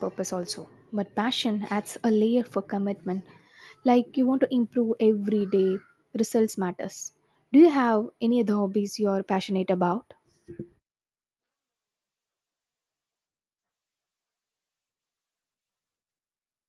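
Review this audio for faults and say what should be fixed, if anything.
No faults found; nothing needs fixing.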